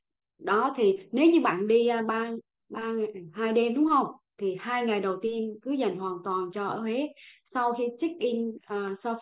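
Speech recording with no technical faults to report. Nothing in the audio calls for a time, a value or a cause.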